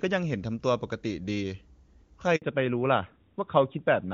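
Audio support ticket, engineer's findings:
Handover gap, 2.36 to 2.42 s: speech drops out for about 60 ms, then resumes. Network handover in the phone's radio path, with no speech frames delivered while the link switched, so that slice of audio is just gone.

Fallback to narrowband, from 2.42 s to the end: top end disappears, nothing above 4 kHz, and the voice goes duller and rougher. The call's codec dropped from HD Voice to the older narrowband mode, consistent with AMR-NB.

Before the switch, the AMR wideband (HD Voice) codec sounds clean, with little or no audible codec damage.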